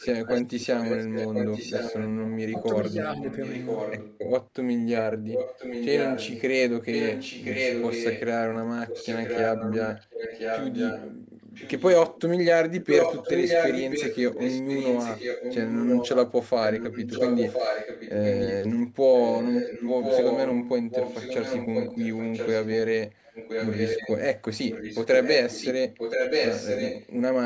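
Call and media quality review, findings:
Echo leak, 0.0–4.18 s, 5.27–12.21 s, 12.8–24.13 s, 24.7–27.13 s. Likely a far-end loudspeaker echo canceller failing to remove mic pickup. Residual returned as a delayed copy of the speech, 1.03 s behind, about 5 dB down early, roughly equal level from 12.8 s.

Speech suppressed in double talk, 2.53–3.2 s, during the first echo stretch. Likely echo canceller mistaking overlapping talk for echo and attenuating both. Talker's speech dips in short pieces, around 10 dB at worst, roughly 150 ms affected in total.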